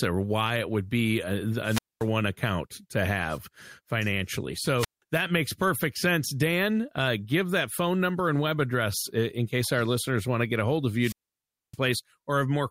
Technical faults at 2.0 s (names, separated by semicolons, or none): wireless microphone squelch dropout